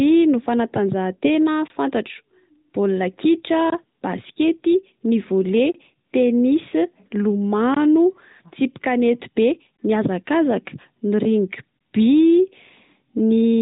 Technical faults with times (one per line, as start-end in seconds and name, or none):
1.68-1.70 gap between chunks
3.70-3.72 gap between chunks
6.70-6.73 lost AMR speech frames